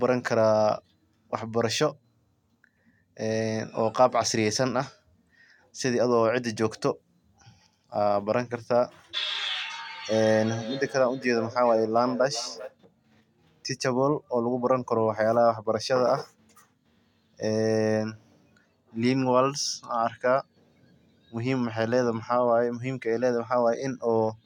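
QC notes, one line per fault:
10.42 to 12.78 s, feedback echo between two devices. The speech comes back at a steady interval of roughly 0.4 seconds, and each return sounds thinner and more ringing than the original. The loudest repeat sits about 14 dB below the direct speech. A second device in the same room is playing this microphone's signal aloud, and the microphone picks it up again. The local echo canceller cannot remove it because it only cancels its own playback.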